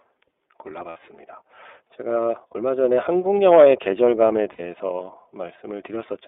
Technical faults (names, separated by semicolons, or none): iLBC codec; lost iLBC frames